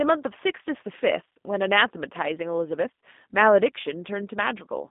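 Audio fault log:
Throughout, G.729 codec: the speech passes through a low-rate parametric coder, which fits 8 kbit/s G.729A, confined to a 200 Hz to 3.6 kHz line band with nothing above 3.8 kHz. It is rebuilt from filter, pitch and pulse parameters, so it sounds muffled, rough and plainly synthetic.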